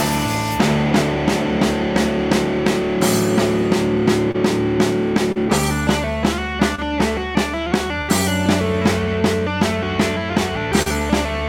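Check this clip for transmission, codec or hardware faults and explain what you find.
The clip has two kinds of network fault, both from packets failing to reach the decoder in time.

Short concealed packet loss occurs four times, at 4.31, 5.32, 6.75 and 10.82 s. Each time the receiver extended the preceding sound for 24 to 33 ms, continuing its pitch or its noise shape, then crossfaded back into real audio. Between 20 and 40 ms of the original is gone at each point, heard as a brief smear or wobble where a short sound may drop out entirely.

A burst of packet loss runs from 8.02 to 8.10 s. Here the gap was too long for a seamless patch. The decoder synthesised 65 ms of continuation, letting it fade as it went, so the sound turns into a held, decaying buzz or hiss. Playback then resumes with 60 ms of the original skipped, jumping forward past the missing part.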